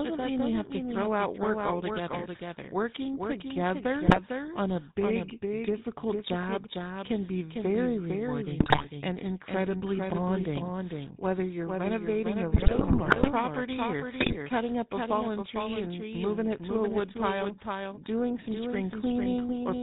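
Throughout the clip the speech is heard twice: a second, full-band copy trails the original by about half a second, a few dB quieter, with no decay or room colour. This doubled audio track is likely caused by the same signal being captured again over a slower path, or by an edit that left two copies out of step. The effect is a dry, flat echo that smears every phrase into its own repeat.

Also present from start to finish is the GSM full-rate codec. The speech has been reduced to a vocal-tract model driven by sparse, regularly spaced pulses, consistent with the 13 kbps GSM full-rate coder. Nothing reaches above 4 kHz, so the speech sounds muffled and band-limited, and the coarse excitation adds a plainly audible buzzy, gravelly roughness to every syllable.

GSM bit errors strike at 4.06 to 4.20 s, 8.60 to 8.88 s, 12.54 to 13.30 s and 14.20 to 14.37 s. Corrupted bits reached the decoder, so the filter, pitch and gain values it rebuilds from are wrong for a run of frames. 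The spectrum bends and the level jumps abruptly. Each burst breaks the speech into squawks, pops and gargling. The longest, at 12.54 s, lasts most of a second.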